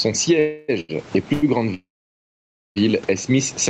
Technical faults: gain pumping; call audio freeze; short stall from a late packet

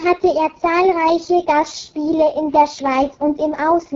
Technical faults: AMR wideband (HD Voice) codec

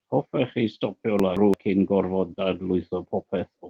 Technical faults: chunks out of order; short concealed packet loss; lost packet rebuilt from error correction

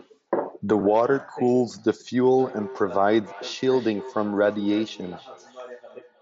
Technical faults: concealed Bluetooth headset packet loss; feedback echo between two devices

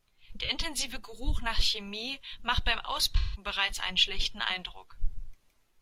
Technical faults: AAC frame loss with concealment

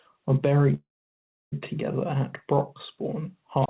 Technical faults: call audio freeze; wireless microphone squelch dropout

